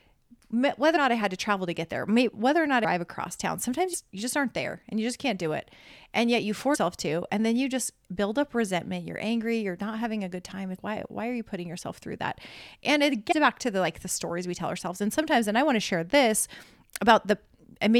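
Compressed frames are skipped at 0.95, 2.84, 3.93, 6.74, 10.78 and 13.31 s, where the speech lurches forward by roughly 150 to 500 ms, in steps of the 23.2 ms frame length. Unlike a dropout, there is no silent gap, just a jump.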